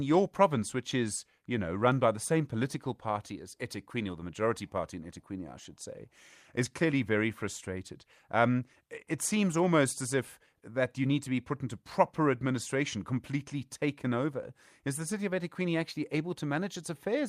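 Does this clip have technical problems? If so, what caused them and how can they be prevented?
No, there are no technical faults in this recording.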